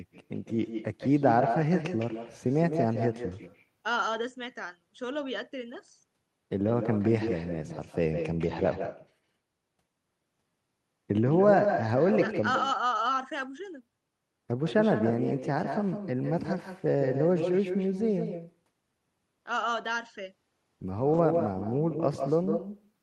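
Throughout, nothing cancels the far-end loudspeaker leaking back into its microphone, so an echo with no canceller trails the speech by about 150 ms, about 7 dB quieter and thinner.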